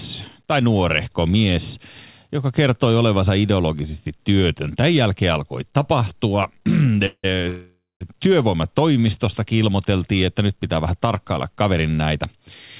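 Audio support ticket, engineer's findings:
Call audio freeze, 7.06–7.25 s. Speech halts and the last sound carries on as a fading buzz, ending in about 60 ms of silence. Likely cause: jitter buffer underrun from delayed packets. Nothing lost; speech resumes 174 ms late.

Second call audio freeze, 7.49–8.03 s. Longer fill of 512 ms, about 200 ms of it silent. Likely the same mechanism. Cumulative added delay near 0.7 s. Band-limited to 4 kHz throughout, which fits G.711 A-law.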